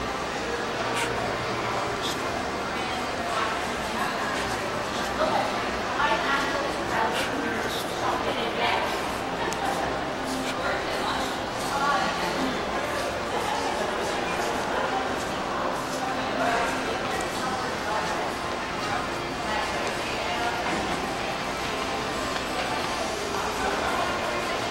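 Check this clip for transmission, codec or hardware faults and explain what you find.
One transmission fault appears. At 18.37 s, an overlap between stream segments made the player trim time-stamped audio that wasn't doubled, so about 16 ms vanishes and the waveform jumps, heard as a tiny skip.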